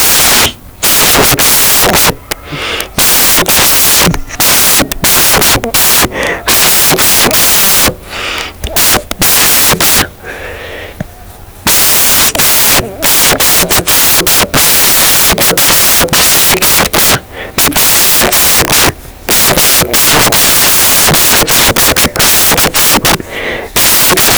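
Speech clip with samples built from the wrong bytes all the way through: byte order or alignment is off, so the low bits dominate, giving loud, harsh noise close to white on the louder passages.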